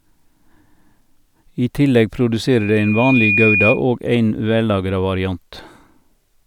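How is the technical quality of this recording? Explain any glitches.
The recording is marred by one clear fault, a loudspeaker feedback squeal. From 2.52 s to 3.82 s a pure tone near 2.4 kHz rises over roughly 0.7 s until it sits around 5 dB above the speech. The microphone is hearing the loudspeaker it drives, and at that frequency the loop gain passes unity, so the tone feeds on itself. On a spectrogram it is a thin, bright horizontal line that thickens and brightens. The waveform envelope swells over the first 0.7 s or so of that span.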